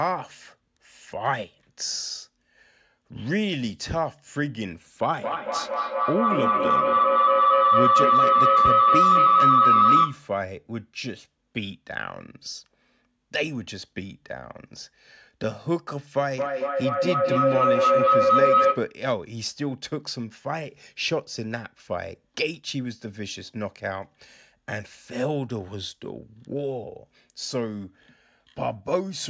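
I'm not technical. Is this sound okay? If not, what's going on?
No. Twice, a loud ringing tone swells up and drowns out the speech. From 5.09 to 10.37 s it's a high whistle around 1.5 kHz, and from 16.19 to 19.03 s a lower hum near 500 Hz. This is feedback howl: two devices in the same room joined the call, so the sound kept looping from speaker back into microphone, getting louder each time, until the loop was broken.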